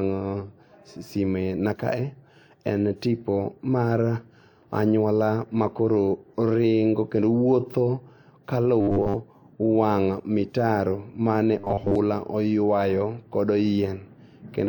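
Speech, with robotic sound from repeated short buffers at 8.81–9.17 s and 11.59–11.96 s: a rigid 100 Hz buzz replaces most of the sound, likely from a 10 ms chunk being replayed. Spectrograms show evenly spaced 100 Hz harmonics; waveforms show identical repeating 10 ms cycles.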